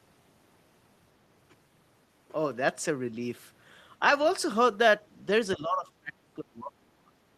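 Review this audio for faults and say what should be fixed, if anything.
Speech suppressed in double talk at 5.57–6.14 s and 6.36–7.15 s: the voice sinks roughly 25 dB in fragments, likely an echo canceller ducking it against far-end speech, partial rather than clean silent dropouts. Fix it with an echo canceller that has reliable double-talk detection, or use a headset so loudspeaker echo never reaches the microphone.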